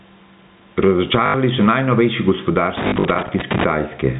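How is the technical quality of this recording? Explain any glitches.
The recording has three audible problems: level pumping throughout, two bursts of repeated-packet stutter, and a stretch of connector crackle. The telephone-band sound, with nothing above 4 kHz, is consistent with G.711 coding.

Gain pumping runs through the whole clip. The level swings by roughly 15 dB. The likely cause is input gain set far too high, with a fast limiter clamping down on every peak and squashing the dynamics.

Packet loss with last packet repeated occurs at 1.26 to 1.34 s, where 80 ms is missing, which fits four 20 ms packets. It occurs again from 2.88 to 3.04 s, where 100 ms is lost in gaps scattered over 160 ms, the longest run being 40 ms. The receiver replays the last good packet. This produces a brief robotic buzz at the packet rate.

Loose connector crackle runs from 2.77 to 3.64 s, overlapping the second stutter. 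An intermittent contact chops the signal on and off rapidly, and any DC on the line turns each break into a pop. The result is an irregular scratchy crackle laid over the audio.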